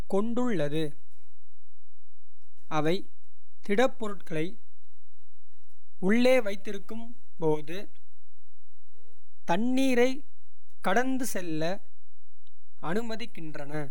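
A DC offset of about -23 dBFS shifts the speech waveform off zero throughout, eating headroom and adding steady energy at the very bottom of the spectrum.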